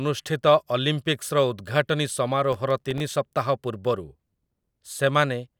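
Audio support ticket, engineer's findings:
Processor overload crackle, 2.53–3.12 s, audio processing host. Burst of gritty crackle over the speech, made of many tiny silent gaps from missed deadlines on very short buffers, around 1.5 ms. Unlike a single dropout, roughly a dozen-plus clustered ticks, then clean.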